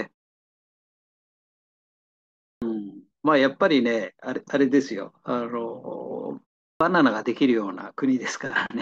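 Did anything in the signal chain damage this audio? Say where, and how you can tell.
Yes, at playback. There is a clipped start after a pause at 2.49 s and again at 6.68 s. Speech resumes abruptly, missing about 128 ms and 125 ms of its onset. The output device sleeps through silence and is still waking when sound returns.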